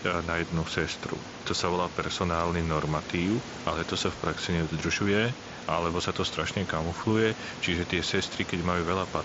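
The speech signal shows no technical faults, with the room's background noise sitting about 15 dB below the speech and the audio carried over a Bluetooth mSBC headset link that passes frequencies up to 8 kHz.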